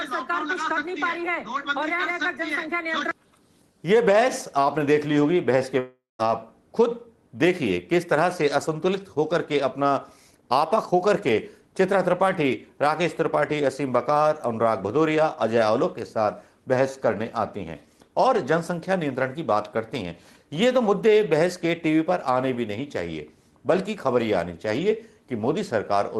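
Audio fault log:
5.79 to 6.22 s, long network dropout: the sound smears into a buzzy hiss that fades over roughly 0.4 s, leaving a brief silence before the audio returns with about 0.4 s missing. Likely packets stopped arriving and the receiver stretched the last sound to cover the gap.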